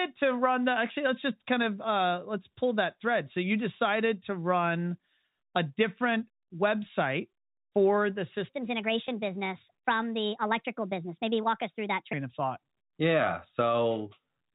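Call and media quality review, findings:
Section at the wrong speed, 8.49 to 12.13 s: speech runs 1.36 times fast, pitch up about five semitones. Likely a clock or resampling mismatch in playback or editing. Spectrogram shows harmonics and formants shifted upward, syllables compressed in time.

Packet loss with pitch repetition at 9.07 s, inside the sped-up section: brief held, buzzy note. A 10 ms gap, which fits one lost packet, bridged by concealment repeating the last pitch period. Waveform shows identical repeated cycles; spectrogram shows a short steady harmonic smear. The G.711 telephone band stays intact throughout.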